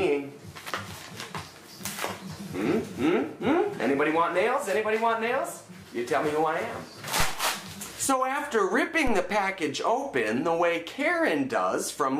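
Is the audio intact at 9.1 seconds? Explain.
No. At 9.07 s a DC step shifts the zero line by about -20 dBFS, which decays through a 2 Hz high-pass and is heard as a low thump.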